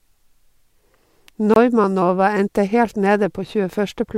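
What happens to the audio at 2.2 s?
Nothing goes wrong at 2.2 s; the speech plays through that moment intact, with no dropout, click or distortion.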